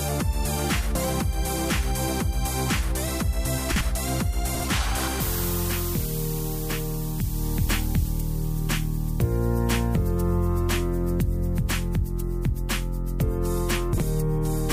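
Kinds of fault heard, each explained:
Chunks out of order: Short blocks of audio play in the wrong sequence. Each block lasts about 46 ms, and one arrives a single block late, so it plays after its successor. Nothing goes missing, but the sound jumbles briefly at the hard joins. This happens three times, at 3.72 to 3.81 s, 4.55 to 4.64 s and 13.93 to 14.03 s.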